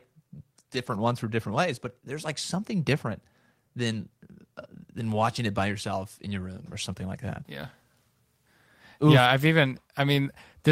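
From 0.73 to 0.95 s the speech turns briefly rough and noisy without dropping out, which is a lost packet rebuilt from error correction. The lost audio, about 120 ms, which fits six packets, was replaced by lower-bitrate copies carried in the following packets.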